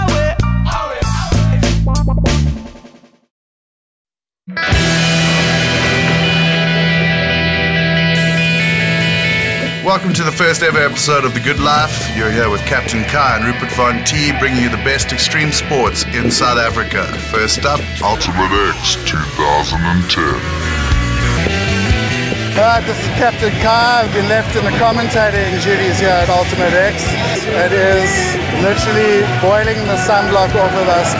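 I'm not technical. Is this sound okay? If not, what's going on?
No. From 18.15 to 21.38 s there's a wrong sample rate fault: the sound plays at about 0.73 times its proper speed and drops roughly five and a half semitones, both at once. That fits audio recorded at 22 kHz being played back at 16 kHz.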